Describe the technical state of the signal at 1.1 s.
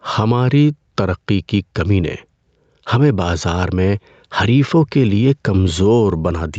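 At 1.1 s the signal shows gain pumping, present across the whole clip rather than at this moment alone. The cause is likely input gain set far too high, so a fast limiter or compressor clamps down on each loud syllable and releases in the pauses. The level swings by around 5 dB, leaving the dynamics squashed, within a call-codec band that stops at 8 kHz.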